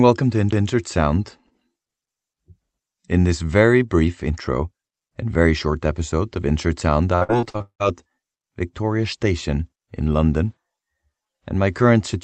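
Speech, carried over a call path whose sound tops out near 8 kHz, which fits a wideband call codec such as Opus. At 0.51 s there is a CD skip. A tick and a very brief mute are heard. Playback then resumes from a different point on the disc. A knock or a disc flaw likely made the laser jump to another turn of the spiral. From 7.15 to 7.82 s there is repeated packet loss, heard as robotic sound. The audio turns choppy. Seven gaps fall in this stretch, the longest 179 ms. Each hole is patched by stretching the last sound, and over half the span is filler.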